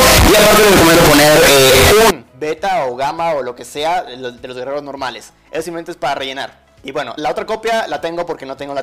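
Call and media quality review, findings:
Float read as integer, 0.00–2.11 s. Sound slammed to a near-square waveform at an almost fixed, high level, harsh and very loud, background noise as loud as the wanted sound, pitch still traceable. Likely 32-bit float samples decoded as 32-bit integers, with sign and exponent bits driving level. Unlike clipping, quiet passages are as loud as peaks, and the level is not capped at full scale.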